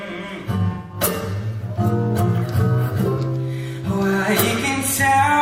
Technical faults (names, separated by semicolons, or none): AAC frame loss with concealment